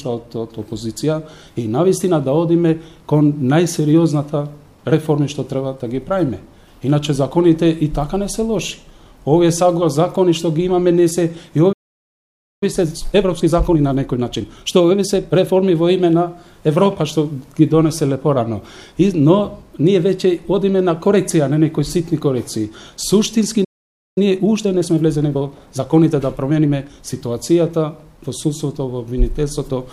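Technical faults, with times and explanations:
11.72 to 12.63 s, playback stall: the player likely ran short of buffered data or had its output thread held up, so nothing reached the output for about 0.89 s. The audio cuts off mid-flow into silence, then picks up again.
12.63 to 15.63 s, time-compressed catch-up: to clear the backlog built up during that gap, the player trims out short slices and cross-fades across the joins, running at about 1.25 times normal speed for three seconds. The sound is hurried but keeps its pitch.
23.64 to 24.18 s, playback stall: a second interruption, this one about 0.52 s long, where the player was likely starved of data or blocked again. The output drops to silence partway through the sound before resuming.
24.18 to 27.18 s, time-compressed catch-up: the player again shortens its queue by cutting and cross-fading small pieces, this time at about 1.15 times speed for three seconds. 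The hurrying is milder than before, with pitch unchanged.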